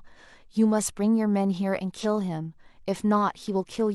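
A short speech clip with one brief glitch from 2.00 to 2.06 s, where the sound breaks up for about 56 ms. This is damaged data in the compressed stream: the decoder hits corrupted frames there, loses sync and has to find the next valid frame before normal audio resumes.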